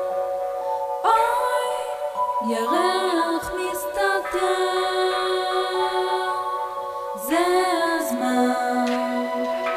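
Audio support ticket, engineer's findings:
Grainy distortion throughout, tracking the signal. Quiet passages gritty; quietest parts sputter or drop out. Low bit depth without dither, likely 7-bit rounding. Error follows the waveform. Distortion sits about 30 dB below the signal level. Check the quantisation stage and its word-length settings.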